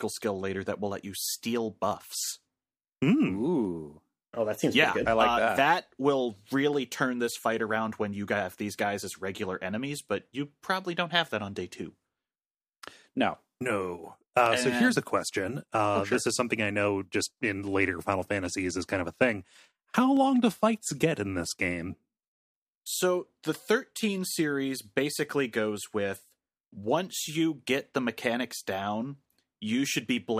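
Dropped samples at 14.46 s, just before "and so here's a", and 20.17 s, before "do fights get in", in this speech: each sharp click likely comes from a sub-millisecond gap making the waveform jump.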